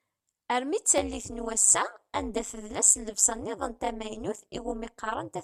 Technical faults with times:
0.98-5.43 overlap-add ripple

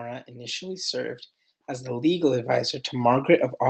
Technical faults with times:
0.28-3.62 automatic gain rising

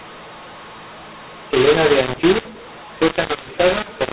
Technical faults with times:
0.00-4.13 mu-law and A-law mixed up

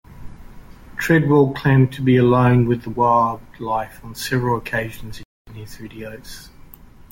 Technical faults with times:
5.23-5.47 playback stall

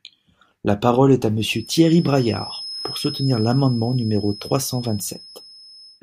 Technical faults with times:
1.34-6.03 feedback whistle

